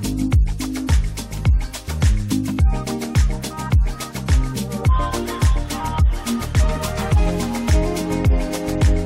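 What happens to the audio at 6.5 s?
Nothing goes wrong at 6.5 s; the audio runs through that moment intact, with no dropout, click or distortion.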